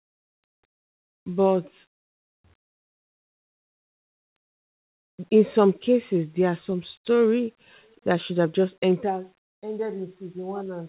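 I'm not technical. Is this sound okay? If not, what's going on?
Yes, it's fine: this is speech that came through an ordinary phone-style call line, so it has the familiar narrow telephone sound with nothing above 4 kHz, which is simply how those calls normally sound.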